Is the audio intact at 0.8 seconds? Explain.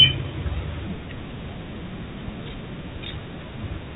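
Yes, at 0.8 seconds the speech runs on intact, with only the narrow telephone band and faint level-following hiss of G.711 telephone coding that are present throughout.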